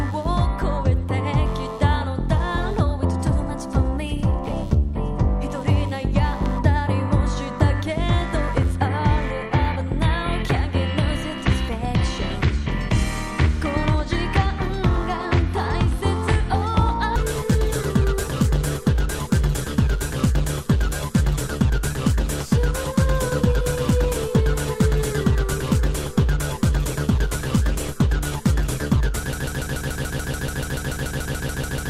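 Computer activity noise runs through the whole clip. Changing load on the computer's processor, graphics card or mouse shifts the ground shared with the audio circuit, leaving a pulsing interference at around 100 pulses a second, roughly 35 dB below the sound. It swells and recedes with the machine's activity, not with the audio.

From 29.33 s to the end, a broken-record loop takes over, likely because the player, encoder or stream stalled and kept sending the last fragment it held. A 144 ms piece repeats exactly, back to back, 18 times, and the audio that belonged there is lost.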